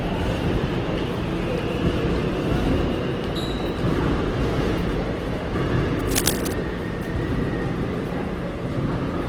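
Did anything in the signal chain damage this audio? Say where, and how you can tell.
Yes. At the codec stage, the whole clip carries the marks of likely Opus compression in its music (CELT) mode. The encoder keeps each band's energy but fills the bands it can't afford to code exactly with folded copies of lower bands or with noise. So tonal parts come out rough, grainy and noisy rather than swirly, while the full bandwidth is kept. Damage this plain points to a starved bitrate, something like 16 kbps.

In the analogue wiring, a burst of cable scratch noise runs from about 5.99 to 6.54 s. A worn cable, connector or control is likely being disturbed there, and its contact resistance jumps about rapidly, injecting dense, uneven crackle into the signal. It sits only a little below the level of the sound itself, so for that half-second it is heard as an obvious scratching, rustling layer over the audio.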